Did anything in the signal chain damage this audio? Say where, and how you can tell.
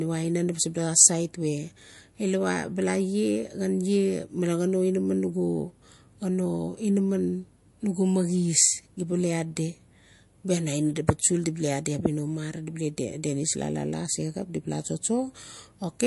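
Yes. MP3 compression damage runs through the whole speech clip: nothing is present above 11.3 kHz, and the sibilants carry a plainly audible watery, swirling texture with smeared onsets. That points to the codec stage, most likely a low-bitrate MP3 encode, which fits something around 48 kbps. Short of bits, the encoder chopped the treble at a fixed ceiling and dropped weak spectral lines that flicker on and off between frames.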